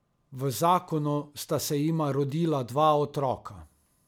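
No faults are audible anywhere in the speech.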